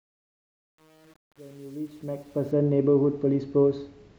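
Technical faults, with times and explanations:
0.00–2.51 s, truncation distortion on a fade: the fade-in's gain stage drops low bits without dither, which fits an 8-bit stage, so quiet samples become coarse square steps. Until 2.23 s the speech turns gritty.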